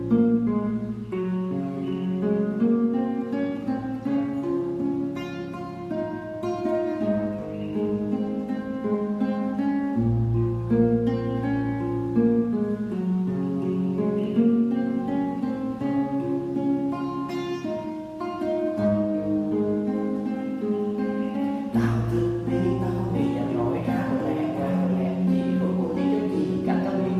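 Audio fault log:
No audible faults detected.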